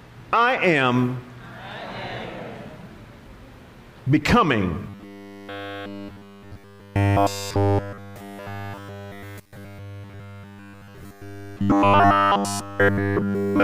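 From 4.90 s until the end at 13.64 s, the audio turns into robotic sound from repeated short buffers. It takes on a rigid, metallic buzz at about 100 Hz that loosely tracks the original contour. The likely cause is audio arriving too seldom, so the software keeps looping a 10 ms fragment while the real signal is skipped. Essentially all of this section is repetition, and that fixed loop period imposes the steady pitch.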